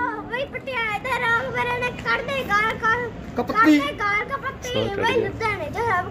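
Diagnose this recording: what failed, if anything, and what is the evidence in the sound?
Dropped buffer (overrun) at 0.48, 1.71 and 2.71 s: jumps where the sound skips ahead roughly 40, 20 and 10 ms, likely driver capture buffers overwritten unread.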